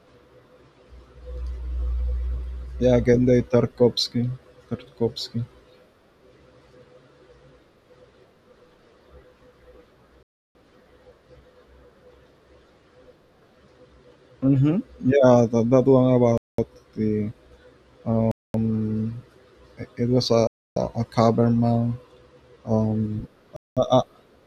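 The speech cuts to dead silence for 0.2 to 0.3 s at 10.23, 16.38, 18.31, 20.47 and 23.56 s, then carries on. That's likely a Bluetooth stall draining the headphones' buffer.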